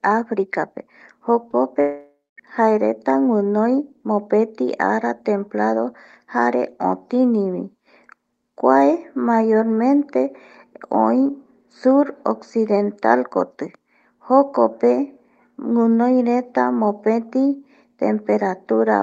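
Speech over an Opus call path, top end stopping around 8 kHz, with two network faults. At 1.51 to 1.54 s there's short concealed packet loss: about 20 ms never arrived in time, so the decoder stretched the previous sound over the gap and blended back, leaving a quick smear or wobble. Then from 1.80 to 2.39 s the sound turns into a fading buzz or hiss continuation that thins to roughly 0.2 s of near silence before the speech returns at "jaereta guinoi mopeti", with about 0.58 s simply gone. That's likely a long network dropout, with the receiver padding the gap until it ran out of anything to continue.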